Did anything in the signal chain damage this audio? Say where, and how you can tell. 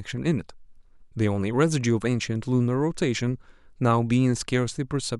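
No: nothing in the capture, conversion, transmission or playback stages has audibly damaged this speech recording.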